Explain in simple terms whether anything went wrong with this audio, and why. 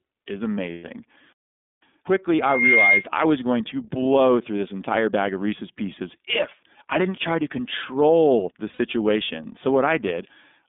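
The whole recording sounds thin, muffled and slightly rough, almost synthetic, with nothing above about 3.6 kHz or below about 200 Hz. That is the iLBC codec, a low-quality phone-call format that squeezes speech into 30 ms chunks and throws away the upper frequencies.

From 0.72 to 0.84 s, and again from 8.73 to 8.79 s just after "try to control the", the sound briefly turns into a held, buzzy hum. These are lost iLBC frames. Chunks of audio went missing in transit, about 120 ms and then 60 ms, consistent with four and two lost 30 ms frames. The decoder filled each gap by repeating the last sound, then recovered almost at once.

From 2.42 to 3.05 s, a high, steady whistle at about 2.1 kHz swells up over roughly a third of a second and then stops just before "I was going to". That is loudspeaker feedback squeal. The microphone picked up its own loudspeaker, and that one pitch kept looping back and growing louder.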